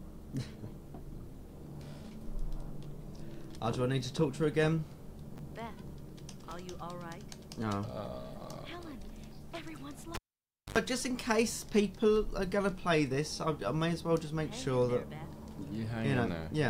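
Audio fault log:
5.36–5.39 s and 6.49–6.52 s: chunks out of order. Each time, a 10 ms slice of audio lands two slices late, so it plays after material that should have come after it. Nothing actually goes missing, but the reshuffle leaves three hard edges where the waveform jumps. That's why you get a quick jumbled flicker, twice, about a second apart, each lasting only around 30 ms in total.
10.15–10.78 s: cable pulled and plugged in. There's a pop as the live lead comes out, then close to silence for about 0.58 s. As it goes back in, the tip touches first and you get roughly 86 ms of 50 Hz mains buzz, since the ground hasn't made contact yet. A second pop follows when the plug seats and the sound comes back.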